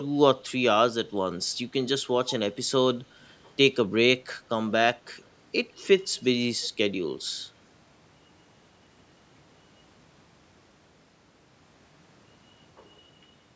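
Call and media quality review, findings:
Echo leak: faint delayed repeats at 0.00–0.06, 2.28–2.35, 6.00–6.25, 6.64–6.68 s, lagging about 150 ms, roughly 15–35 dB down. Likely far-end echo canceller residual; fixed lag, unlike reverb.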